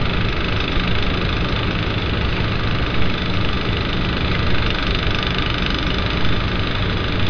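No technical faults are audible anywhere in this recording of sounds.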